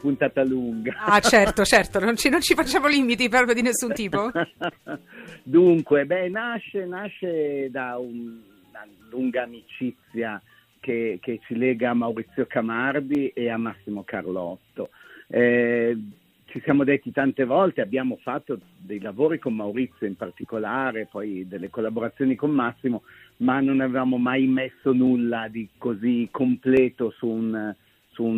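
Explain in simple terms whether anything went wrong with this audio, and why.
Regular clicks every 1.7 s, from 1.23 s to 26.77 s, are likely clock drift buffer slips: mismatched device clocks force dropped or repeated samples.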